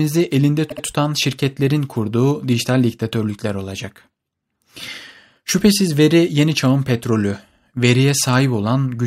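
Repeated frames occur from 0.69 to 0.83 s, just before "tutan şirketlerin kurduğu dijital". A 72 ms stretch of compressed speech, which fits a run of three frames, plays twice more in succession, producing a brief stutter and lengthening the audio by 144 ms.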